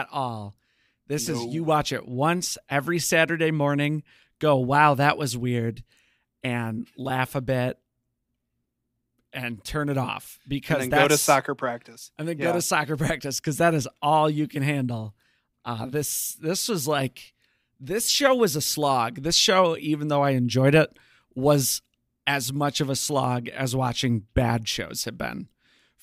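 Nothing stood out on listening to the speech recording.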